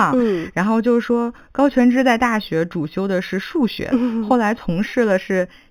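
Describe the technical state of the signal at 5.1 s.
At 5.1 s the speech carries imaging from linear upsampling, present throughout the clip. The sound points to a raise from 8 kHz to 44.1 kHz by straight-line interpolation, leaving a mirrored image between 4 and 8 kHz, roughly 30 dB down, heard as faint metallic shimmer over a dulled top.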